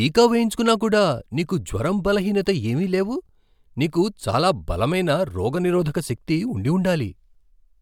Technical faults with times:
none

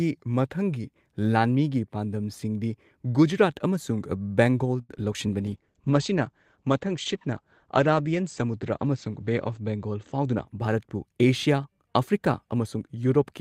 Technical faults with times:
4.81-4.91 short stall from a late packet
4.95-4.98 short concealed packet loss
5.48-10.53 call bitrate drop
10.14-10.88 jitter buffer speed-up

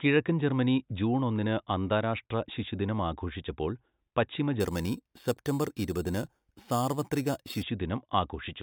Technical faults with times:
4.60-7.63 imaging from sample-and-hold upsampling

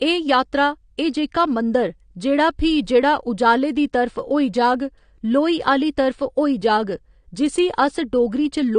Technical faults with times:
0.00-8.78 AAC compression

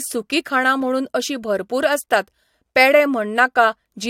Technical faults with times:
none

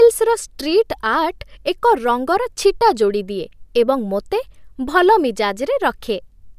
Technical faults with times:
none

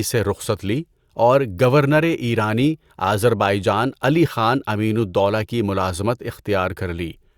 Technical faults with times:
none

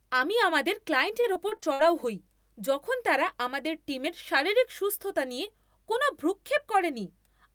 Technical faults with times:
1.21-1.81 repeated packet loss (robotic sound)

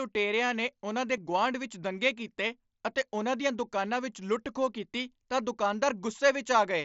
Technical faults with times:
1.17 concealed Bluetooth headset packet loss

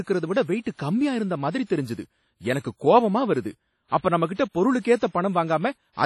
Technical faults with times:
0.00-6.06 WMA compression
0.61-0.66 pre-echo
1.66-1.70 pre-echo
3.88-3.92 pre-echo
4.35-4.39 pre-echo
4.80-4.85 pre-echo

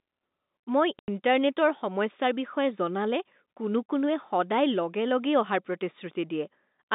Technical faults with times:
0.99-1.08 packet loss filled with silence

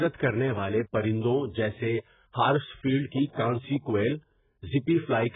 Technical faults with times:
0.00-5.35 AAC compression

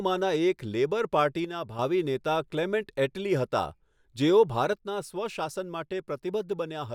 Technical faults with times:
1.45-1.79 one channel drops out
4.73-6.95 one channel drops out

